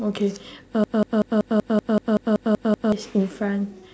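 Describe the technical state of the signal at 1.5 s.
At 1.5 s the speech is caught in a broken-record loop running from 0.84 to 2.92 s: a 190 ms fragment repeats exactly, back to back, eleven times, most likely because the player or stream stalled and kept resending its last buffered piece. It sounds like a stuttering, machine-regular chatter, and the speech due in that span is lost. On a waveform or spectrogram, identical blocks tile at a fixed 190 ms period.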